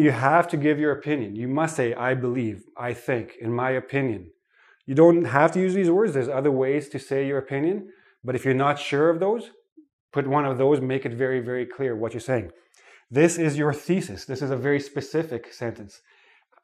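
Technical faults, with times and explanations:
No technical faults are audible anywhere in the recording.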